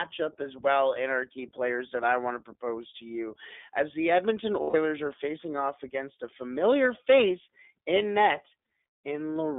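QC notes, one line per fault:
throughout: iLBC codec. The speech is clear but slightly rough and synthetic, with a thin, boxy tone: nothing below about 250 Hz or above about 3.6 kHz comes through, so sibilants lose their edge and the low body is missing. The codec rebuilds the excitation of each 20 ms frame on its own rather than predicting from the previous one, and the grainy, buzzy quality fits its 15.2 kbps mode. The damage is plainly audible.
4.62–4.76 s: lost iLBC frames. Just before "are facing off against", the speech turns into a held, faintly buzzy and breathy vowel-like tone lasting about 120 ms, which fits six consecutive 20 ms frames going missing. To fill the gap, the decoder keeps repeating the last pitch cycle it received, mixes in noise and fades the result. Because iLBC frames decode independently, the next words come back clean almost at once.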